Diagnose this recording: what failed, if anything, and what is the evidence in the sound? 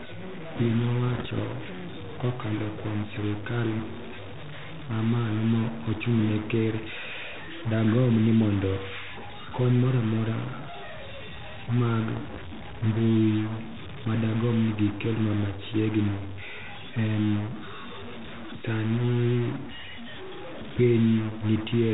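A distortion rides on the speech for the whole clip. The pauses are not silent. They fill with noise. That pattern points to a stuck bit, likely in the converter or a broken data line to it. One data bit holds at 0 or 1 regardless of the signal. About half the samples are then off by that bit's weight. Near silence the error flips with the waveform's sign, so the gaps turn to noise.

Bit errors on an ADPCM link show up twice. The first is from 1.09 to 1.41 s and the second from 12.17 to 12.41 s. Each sounds like pops and rough bursts with brief jumps in level. The first is denser, which fits an error rate around half a percent. The second is lighter. The link is 32 kbit/s G.726, which is band-limited to 4 kHz. A flipped bit throws off the decoder's step size and predictor. That is why each error rings on for milliseconds.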